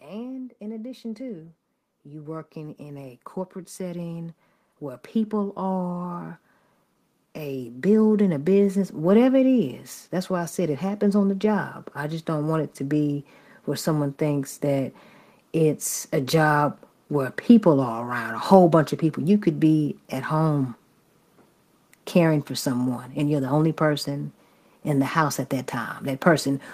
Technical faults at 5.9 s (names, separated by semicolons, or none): automatic gain rising